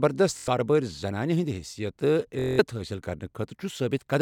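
Bluetooth stutter at 0.37–0.48 s and 2.39–2.60 s. Lost packets loop a tiny slice into a buzz. Speech then jumps ahead, skipping 93 ms, then 186 ms.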